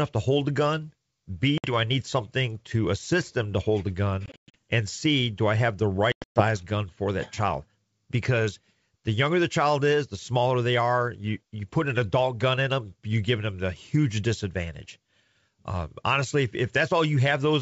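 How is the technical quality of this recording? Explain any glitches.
Three dropouts from packet loss on an ADPCM call break up this wideband speech recording, which has the clear band up to about 7 kHz, with a light upper-band hiss, of G.722 coding, consistent with the 64 kbit/s mode.

From 1.58 to 1.74 s, just before "I need something to", a hard-edged 60 ms hole opens, the equivalent of a few packets. The sound resumes slightly distorted. The gaps were filled with silence, and the decoder's adaptive predictor and step size lost track of the sender's, so it needs some tens of milliseconds to recover.

From 4.26 to 4.55 s, after "them to hold a", 200 ms go missing in pieces across 280 ms, the longest piece 120 ms. This makes a stuttering, chopped stretch with distorted fragments between the holes, as the decoder repeatedly re-converges.

From 6.12 to 6.43 s, between "do I have the" and "gun for that child", 220 ms vanish within 240 ms, again with a longest gap of 120 ms. 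This is nearly one continuous hole, and the speech comes back slightly distorted.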